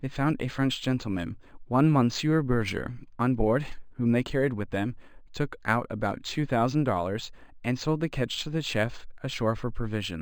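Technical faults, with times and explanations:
Throughout, imaging from linear upsampling: the speech sounds like an 11 kHz source raised to 48 kHz by straight-line interpolation, a poor filter. Highs are dulled, and a mirrored copy of the spectrum sits at 5.5 to 11 kHz, roughly 25 dB down, adding a faint metallic shimmer to sibilants.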